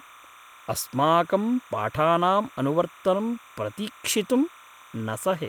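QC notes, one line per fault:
Throughout: timecode bleed, a steady chirping warble about 25 dB under the speech, as square-wave code switching near 1 and 2 kHz leaks from a neighbouring line, with a pattern that fits 29.97 fps code; the spectrogram shows persistent bands near 1 and 2 kHz with harmonics above.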